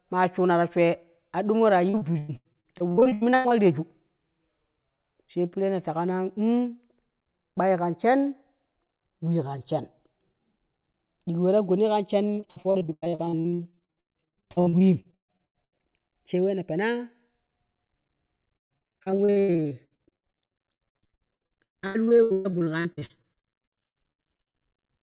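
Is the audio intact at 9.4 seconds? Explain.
No. At 9.4 s, as throughout the speech, the channels are drifting apart: clocks differing by roughly 30 parts per million let the inter-channel delay slide toward under a millisecond. This sweeps mono comb notches slowly, giving slow flanging, unlike a fixed offset's static coloration.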